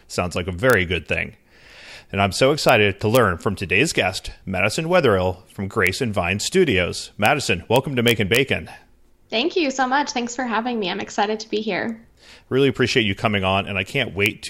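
Integer overflow cracks occur at 0.70–0.73 s, between "like a" and "good thing", then at 2.69, 3.15, 5.87 and 7.26 s, across 7.76–8.36 s, and at 14.26 s. Speech peaks beyond the integer range wrap to the opposite sign instead of limiting, giving violent cracks sharper than clipping.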